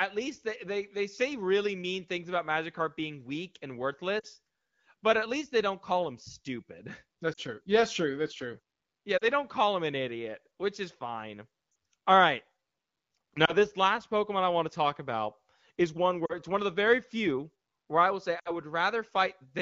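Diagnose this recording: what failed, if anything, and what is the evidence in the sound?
Lost AMR speech frames from radio errors. Brief dips toward near silence occur at 4.19 s after "being weak and", then 7.33, 9.17, 11.71, 13.45 s before "this last", 16.25 and 18.39 s. Each lasts 20 to 60 ms. The decoder repeats stale pitch and vocal tract settings at fading gain.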